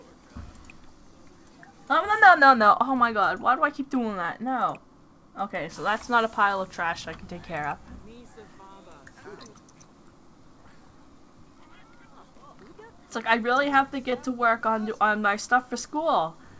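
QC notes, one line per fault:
14.10 to 14.14 s, short concealed packet loss: about 20 ms never arrived, so the receiver stretched the preceding sound to cover it, leaving a brief smear.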